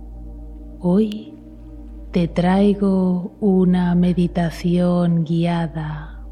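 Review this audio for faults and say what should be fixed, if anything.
At 1.12 s there is a single sharp snap, an electrical switching spike reaching around -15 dBFS and lasting only a millisecond or so, sitting on top of the sound rather than replacing it. The shape points to a brief arc from a nearby switch, motor or static discharge that the audio line picked up, which is the likely cause here. It can be removed with a click-repair tool. To prevent it, keep cable runs away from switched mains loads and motors, and use balanced, shielded cabling with proper grounding.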